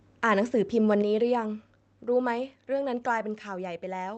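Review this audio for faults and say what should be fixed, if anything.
A brief harsh crackle on the loudest peak at 0.90 to 0.92 s, with a few percent of samples flattened about 1 dB over full scale, is likely microphone overload, where input gain drives the converter past its limit. Lower the microphone input gain so the loudest peaks sit well below full scale.

At 1.02 s the voice and background both drop abruptly by about 4 dB, just after that distorted peak, likely the microphone volume being stepped down by the call software reacting to clipping. Set a safe input level in advance and turn off automatic gain adjustment so the software never needs to correct it mid-call.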